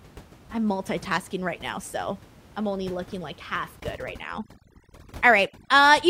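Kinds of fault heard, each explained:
Overdone noise removal: from 3.8 s, an over-strong noise reducer mutes frequency bins near its noise estimate, so the room noise drops and breaks up into twinkling specks. A spectrogram shows a black floor dotted with isolated blips and broken harmonics.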